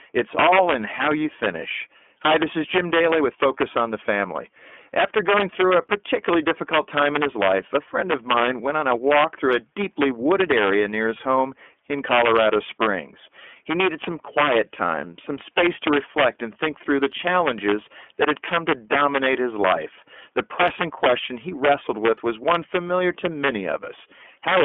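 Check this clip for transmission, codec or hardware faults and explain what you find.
Two faults run through the whole speech clip: integer overflow and iLBC codec damage.

Integer overflow, throughout: the signal is driven about 4 dB past the integer limit, so the loudest peaks, a small fraction of samples, wrap to the opposite sign instead of limiting. Each wrapped peak jumps across the full range, heard as violent cracks far harsher than clipping.

iLBC codec, throughout: the band runs only from 250 Hz to 3.4 kHz, with plainly audible coding damage. The sound fits iLBC's 13.33 kbps mode, coding each 30 ms frame's excitation independently, leaving the speech intelligible but rough and synthetic, with nothing above 3.4 kHz.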